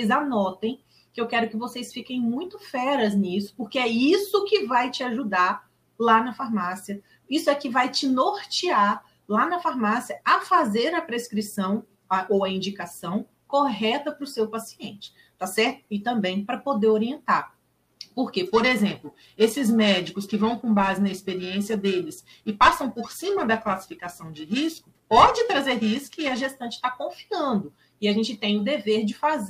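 From 18.46 to 26.46 s, periodic clock jitter sets in. The converter's clock is shaken at around 1 kHz, flanking every component with sidebands at that spacing, which gives a rough metallic edge. Unlike hiss or a steady hum, it disappears whenever the sound falls silent.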